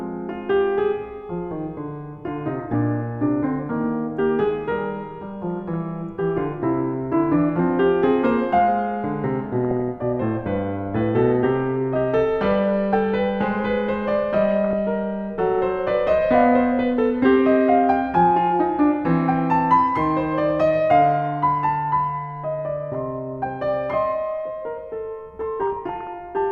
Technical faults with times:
2.63-2.74 DAB burbling
5.47-5.76 DAB burbling
9.64-9.89 DAB burbling
14.64-14.79 DAB burbling
25.61-26.07 DAB burbling

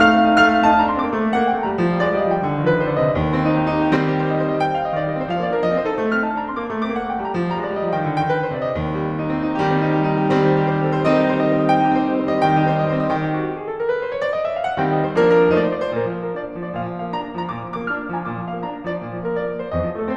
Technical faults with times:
3.96-20.16 sudden gain jump

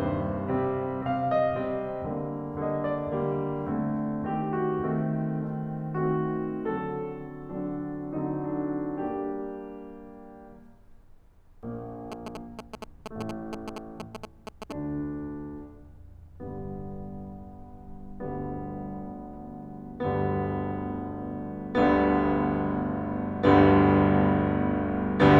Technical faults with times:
12.12-14.72 GSM signalling bursts

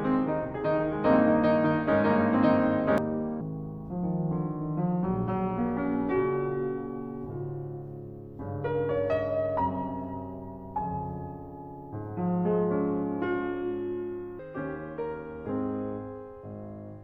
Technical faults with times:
0.00-2.98 doubled audio track
3.41-14.39 section at the wrong speed

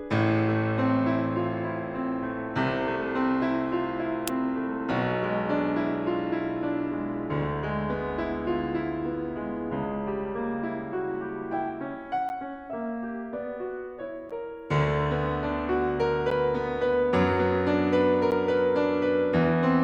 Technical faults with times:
12.29-18.32 periodic USB or driver dropouts

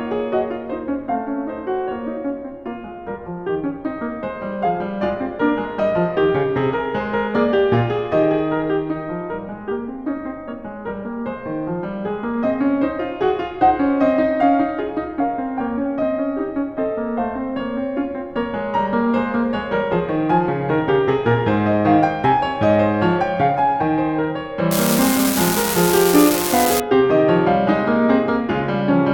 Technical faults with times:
24.71-26.80 unreliable data bit

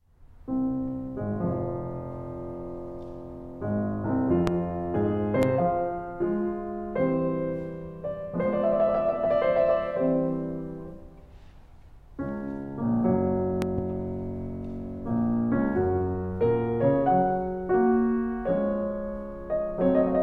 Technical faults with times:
4.47-4.50 loud pop
5.43-5.45 loud pop
13.62-13.81 loud pop

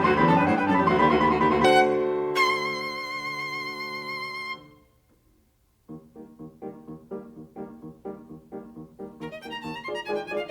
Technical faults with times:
1.61-1.65 damaged data in a compressed stream

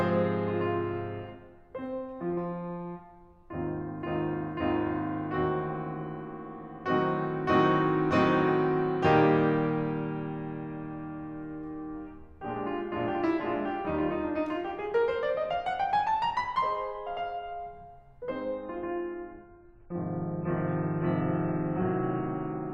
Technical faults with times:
18.44-22.74 adaptive stream at a lower bitrate

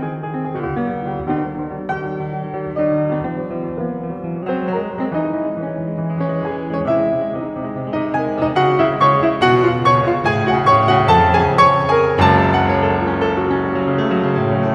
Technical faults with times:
0.60-4.43 wrong sample rate

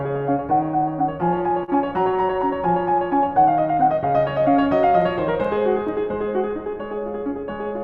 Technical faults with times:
0.00-7.83 clock drift between sender and receiver
0.18-7.80 repeated timing corrections
1.64-1.70 short stall from a late packet

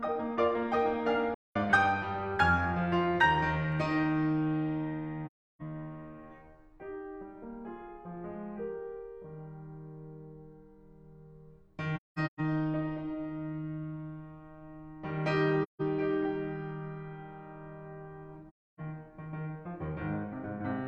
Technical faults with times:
1.34-1.56 AAC frame loss with muting
5.26-5.62 AAC frame loss with muting
11.96-12.40 AAC frame loss with muting
15.63-15.81 AAC frame loss with muting
18.49-18.80 AAC frame loss with muting

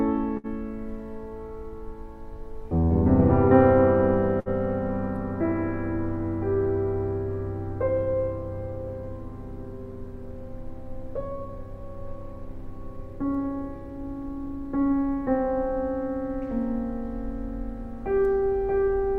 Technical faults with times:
0.37-0.47 burst of packet loss
4.40-4.49 burst of packet loss

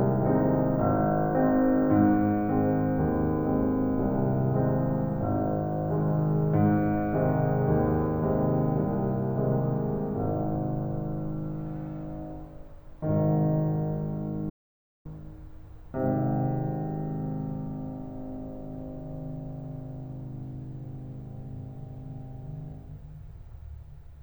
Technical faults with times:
14.50-15.05 audio dropout to silence

